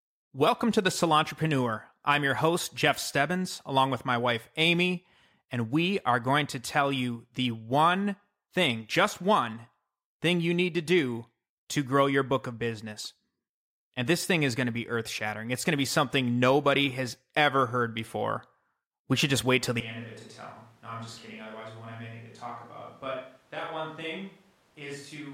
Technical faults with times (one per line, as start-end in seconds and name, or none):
19.81-25.34 switch to a distant microphone